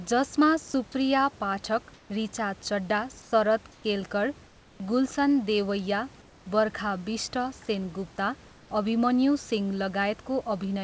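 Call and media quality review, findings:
Sound dropped by the voice detector: 20 ms gap at 0.72 s, sound replaced by steady noise. Likely cause is sender VAD misclassifying a quiet sound as background and halting transmission; receiver filled it with comfort noise.

Comfort noise in place of the background: room tone swapped for flat, featureless noise at 1.94–2.10 s, 3.22–3.32 s, 4.46–4.80 s, 6.22–6.46 s (ending just before "बर्खा बिष्ट") and 8.48–8.70 s, each about 2–4 dB quieter than the real background. This is likely DTX at the sender, with receiver-side synthesis during pauses. The band above 8 kHz is absent throughout, consistent with a G.722 wideband path.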